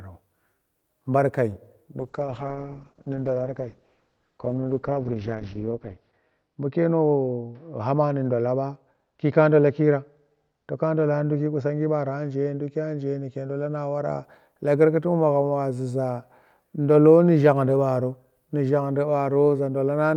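From 2.0 s to 14.29 s a call bitrate drop cuts the encoder from 64 to 8 kbps, bottoming out for 4.2 s. Coarser coding and a bandwidth cut from 20 kHz to 6 kHz leave the speech rough and muffled until recovery.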